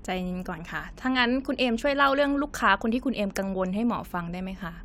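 Nothing in the recording stood out as a technical problem on listening.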